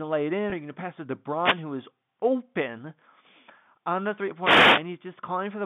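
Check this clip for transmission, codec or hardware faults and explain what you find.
Two kinds of fault are audible in this speech clip: a brief packet loss concealed by pitch repetition, and two wireless microphone noise hits. The speech is carried over G.711 telephone coding, so it is confined to a band of roughly 150 Hz to 3.6 kHz.

Packet loss with pitch repetition occurs from 0.50 to 0.52 s. About 20 ms of audio went missing, which fits a single lost packet. The receiver bridged the gap by repeating the last pitch period it had received instead of leaving a hole. Because the gap is so short, the repetition never reaches its fade to silence. It is heard as a momentary held, slightly buzzy sustain before normal speech resumes.

Wireless microphone noise hits occur from 1.34 to 1.67 s and from 4.40 to 4.85 s. In each, the analogue FM radio link faded as reflected signals partly cancelled the direct one. 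As the received signal weakened, the receiver's own noise rose up through the audio. Each hit lasts about a third to half a second and sounds like a swish or burst of static laid over the speech.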